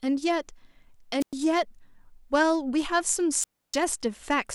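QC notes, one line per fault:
1.20 to 1.33 s, wireless microphone squelch dropout. Hiss rises briefly, then the speech cuts to near silence for about 105 ms. The radio signal faded, so the receiver's squelch muted the output.
3.39 to 3.77 s, wireless microphone squelch dropout again. This hole is longer, about 298 ms of near silence. Again the squelch muted the output as the signal faded.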